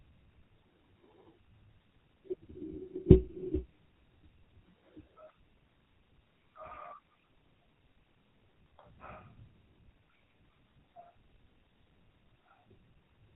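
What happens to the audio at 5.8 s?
At 5.8 s you're hearing tandem speech coding, and it isn't local to that moment; it runs through the whole clip. The speech went through a G.723.1 coder at 6.3 kbit/s, across a G.711 A-law link, then into GSM full rate, so two speech codecs each took a pass. GSM is modelling audio the first codec had already mangled, so the speech sounds rough, muffled and warbly, with nothing above about 3.9 kHz.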